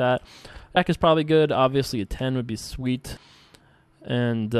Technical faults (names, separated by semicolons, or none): damaged data in a compressed stream